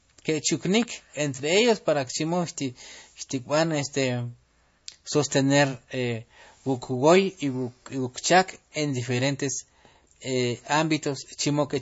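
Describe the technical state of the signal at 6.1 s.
At 6.1 s, as throughout, the speech carries plainly audible MP3 compression artefacts, likely from a low-bitrate encode (roughly 32 kbps): watery smearing, with the spectrogram empty above 7.6 kHz and flickering gaps below.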